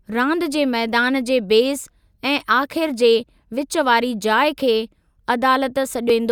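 At 6.10 to 6.13 s, near the end of the speech, there is damaged data in a compressed stream. Part of the encoded data is corrupt. The decoder misreads those frames and loses sync until it finds a valid header. A brief chirp, squawk, click or short hole results.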